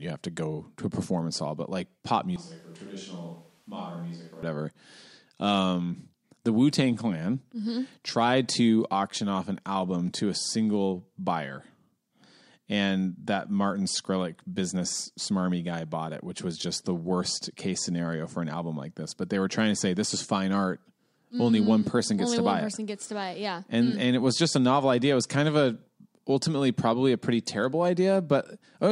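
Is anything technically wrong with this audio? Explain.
Yes. From 2.36 to 4.43 s, just after "hall but like pop", there is a switch to a distant microphone. The close mic's feed likely dropped out, leaving a farther pickup. The speech abruptly turns roomy and hollow, loses bass, falls roughly 10 dB, gains background noise, then snaps back.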